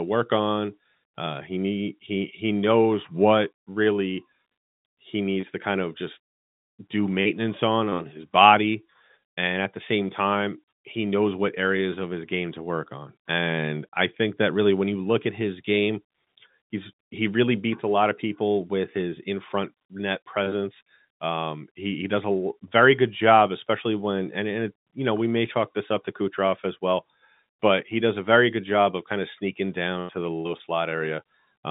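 No technical faults are present.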